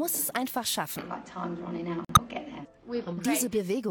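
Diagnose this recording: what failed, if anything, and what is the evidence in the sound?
The codec stage failed, through a corrupt frame muted by the decoder. At 2.05 s the sound stops abruptly and drops to silence. The gap lasts about 0.15 s and ends at 2.19 s. That length points to three consecutive frames of roughly 48 ms each. Damaged bits in those compressed frames made the decoder reject them. The player filled their slots with silence. Timing stays intact, since the hole replaces the audio rather than shortening it.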